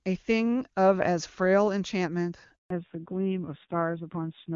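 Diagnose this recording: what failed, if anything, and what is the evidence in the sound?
A handover gap at the network stage cuts the speech from 2.56 s to 2.70 s. The voice fades out within a few tens of milliseconds, and silence follows until the new link carries audio again, about 140 ms after the gap began. On a waveform this shows as a brief taper to a flat line; on a spectrogram it is a clean vertical blank across all frequencies. No frames were delivered while the call moved between networks, so that stretch of speech is gone.

From 2.70 s to the end, the call shows a fallback to narrowband at the codec stage. Before the gap, the AMR wideband (HD Voice) codec carries energy up to about 7 kHz with little audible damage. Afterward, nothing remains above 4 kHz. On a spectrogram the upper band stops abruptly at a horizontal ceiling. The speech sounds duller and rougher, which fits a low-rate narrowband AMR mode replacing the wideband one after the handover.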